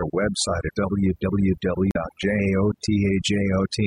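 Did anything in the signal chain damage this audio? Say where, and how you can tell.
Yes. Overdone noise removal at the call-processing stage: a noise suppressor set far too aggressively switches off spectral bands it judges to be noise, taking quiet voice detail with them. Throughout, the background drops and breaks up into twinkling specks.

Damaged data in a compressed stream, at the codec or storage stage: corrupted bytes made the decoder misread frames and lose sync while hunting for the next valid header. From about 1.90 to 1.96 s this is heard as a short glitch.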